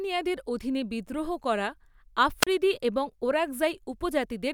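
At 2.41 to 2.47 s the speech suffers a wireless microphone squelch dropout. The radio link from the analogue FM transmitter weakened so far that the receiver's squelch circuit decided no usable carrier was present and shut its audio output. In the recording this comes through as a short surge of hiss or static, then a gap of near silence lasting about 34 ms, after which the speech resumes once the signal recovers and the squelch reopens.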